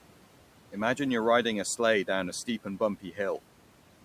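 Speech with noise suppressor artifacts throughout: the room noise, sitting about 19 dB below the voice, is pulled down by about 12 dB between phrases and swells back under them. Because the background pumps in step with the speech, this is processing rather than a noisy room. Just after "down a steep and", from 3.02 to 3.18 s, there is speech cut by the noise suppressor, with a dip of about 10 dB spread over roughly a tenth of a second. The suppressor mistook soft speech for noise, so that stretch sounds swallowed.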